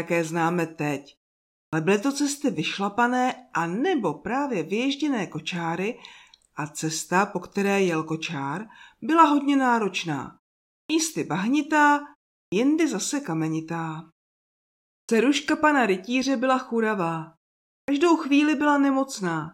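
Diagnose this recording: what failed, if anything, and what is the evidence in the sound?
Speech resumes abruptly at 1.68, 10.85, 12.47, 15.04 and 17.83 s, each onset missing roughly 45 to 52 ms after pauses of 0.4 to 1.0 s. This is a clipped start after a pause at the playback stage: the output device sleeps during silence and swallows the first sounds while waking.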